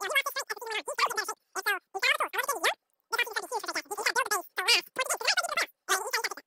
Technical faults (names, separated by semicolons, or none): wrong sample rate